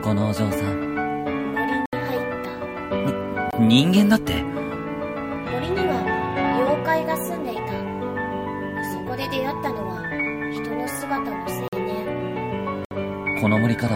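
At 1.86 s the audio drops into a block of digital silence lasting about 70 ms, followed by shorter holes at 3.51 s (23 ms, which fits a 1024-sample buffer), 11.68 s (46 ms, fitting 2048 samples) and 12.85 s (62 ms). Output buffers likely went unfilled, so the samples became zeros. Each hole cuts out and back in with no fade. On a waveform it is a dead-flat line, and on a spectrogram a clean vertical gap bordered by broadband streaks.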